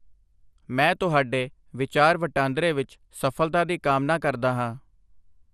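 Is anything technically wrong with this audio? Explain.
Yes. MP2 compression damage runs through the whole speech clip. Nothing is present above 14.4 kHz, and the remaining sound is dull, with a gurgling, grainy roughness. This is likely MPEG Layer II coding at a low rate, one that fits roughly 80 kbps. The coder divides the signal into 32 sub-bands and shares out too few bits, so upper bands drop out and flicker while the lower ones are coarsely quantised.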